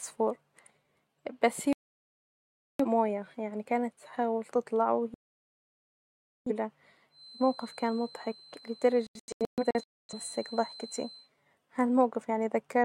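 Digital broadcast dropouts cut this speech clip three times. From 1.73 to 2.85 s the sound goes silent for about 1.07 s, and from 5.14 to 6.51 s for about 1.32 s. Between 9.07 and 10.14 s it breaks into several short holes, the longest 0.26 s, totalling about 0.68 s. Each time the receiver stopped getting valid frames and muted until clean ones returned, so whatever was broadcast in those gaps is gone. A feedback whistle, a thin steady tone near 4.1 kHz, sits well below the speech from 7.08 to 11.31 s and swells and fades slowly in level. It is likely caused by a loudspeaker-to-microphone loop held just short of runaway, which lets that one frequency ring on.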